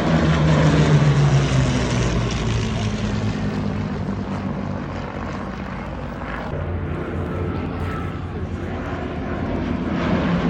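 From 0.07 s to 10.36 s, periodic USB or driver dropouts recur every 0.1 s. Each time, a tiny fraction of a millisecond of audio is skipped, not silenced. About a hundred even ticks result, heard only while sound plays.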